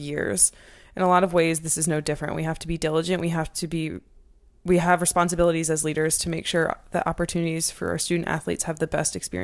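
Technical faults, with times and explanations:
Throughout, resampler restarted on every block: a 50 Hz buzz sits under the speech and appears only while there is signal. Each 20 ms block was converted separately, which fits a 48 kHz to 24 kHz conversion, leaving a small error at every block edge.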